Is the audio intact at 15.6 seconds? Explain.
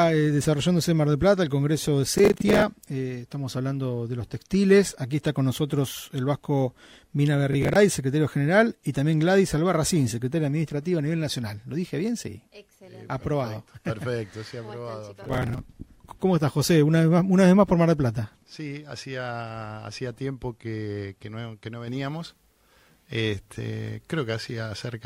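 Yes, though only just. A burst of processor overload crackle runs from 15.24 to 15.59 s and stops about 10 ms before that point. Over that stretch the processor kept failing to deliver its small buffers, each around 10 ms, on time, and roughly twenty deadlines were missed. Each miss replayed a scrap of old audio with hard edges, giving a gritty tearing on top of the sound. On a waveform this appears as a run of abrupt discontinuities; on a spectrogram, as dense vertical broadband streaks that end cleanly at 15.59 s.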